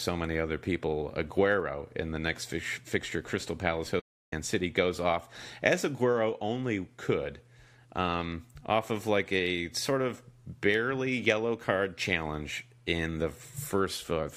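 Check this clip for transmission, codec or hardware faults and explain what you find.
There's one fault, a playback stall. From 4.00 to 4.33 s the speech cuts out to silence for about 324 ms, then carries on. The likely cause is the player running dry of buffered data or its thread getting blocked, so output simply halted until it caught up.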